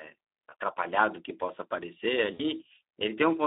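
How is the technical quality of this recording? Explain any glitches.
The recording is narrowband speech with clear codec damage and two short dropouts.

Speex codec: throughout, the audio is band-limited to 300 Hz to 3.7 kHz and sounds hoarse and noisy, consistent with low-bitrate CELP coding around 11 kbps.

VoIP packet loss concealed by the speech codec: at 0.49–0.53 s and 2.33–2.44 s, the decoder extrapolates the last pitch and filter and fades it, giving brief buzzy or noisy, smeared patches. These fit one lost 20 ms frame and roughly three lost frames (60 ms).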